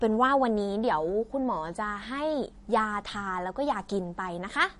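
Speech with plainly audible MP3 compression all the way through: treble stops dead at 10.6 kHz and the sound turns swirly, most likely from a low bitrate around 40 kbps.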